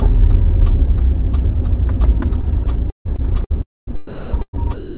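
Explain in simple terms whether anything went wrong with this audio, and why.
From 2.42 s to the end, the sound turns choppy, with 1.1 s replaced by a soft artificial hiss. This is likely sound chopped by the voice detector.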